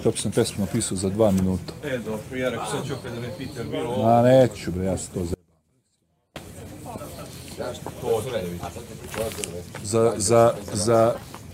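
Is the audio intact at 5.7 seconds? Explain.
No. The signal path likely lost its input between 5.34 and 6.36 s while staying live: an audio dropout to a faint residue, cutting abruptly to a faint leak roughly 35 dB down.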